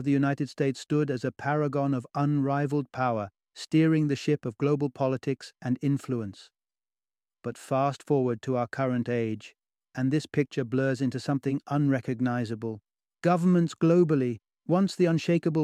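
A short bit of recorded speech, and nothing technically wrong turns up anywhere in it.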